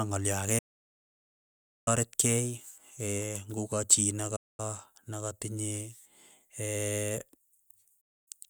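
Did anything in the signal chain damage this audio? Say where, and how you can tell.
Yes, a digital broadcast dropout at the receiver's decoding stage. The speech mutes from 0.58 to 1.88 s, 4.36 to 4.60 s and 8.01 to 8.32 s, each with an 8 ms fade. Failed frames were muted, leaving full-band blank blocks on spectrogram and waveform.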